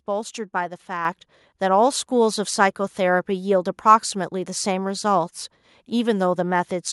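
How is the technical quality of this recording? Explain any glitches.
One glitch stands out. At about 1.05 s the microphone volume is stepped up: the software judged the mic too quiet and bumped input gain about 6 dB in one go, so speech and background jump louder together.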